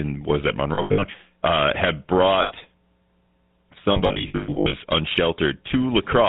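A speech recording carrying plainly audible GSM full-rate codec damage throughout. The voice has the gravelly, buzzy texture of this early codec, which rebuilds the vocal tract from a filter model excited by sparse, regularly spaced pulses. Nothing above 4 kHz survives, so the sound is narrowband and dull, and the roughness is consistent with the 13 kbps full-rate coder. Lost GSM frames interrupt the audio three times, at 0.74 to 1.04 s, 2.42 to 2.53 s and 3.92 to 4.77 s. In each gap the decoder repeats the parameters of the last good frame, which turns the missing sound into a brief metallic, ringing hold. The first stretch loses about 200 ms scattered over 280 ms, with the longest run around 70 ms. The second is a single 80 ms dropout. The third loses about 540 ms across 800 ms, with the longest run around 100 ms. That makes it the most broken-up and ringing section of the clip.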